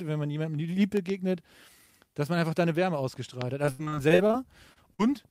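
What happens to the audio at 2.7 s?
Nothing goes wrong at 2.7 s: the speech carries straight through that point without any dropout, click, distortion or other audible fault.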